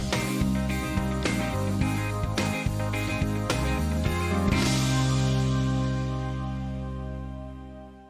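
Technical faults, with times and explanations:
No technical faults can be heard anywhere in this audio.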